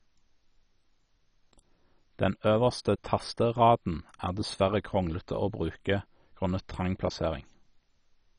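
Throughout the speech, the audio was likely squeezed through MP2 compression at a very low bitrate, near 32 kbps. Upper sub-bands are switched off, leaving nothing above 10.3 kHz, and the remaining bands are coarsely quantised, giving a dull, heavily gurgling, granular sound.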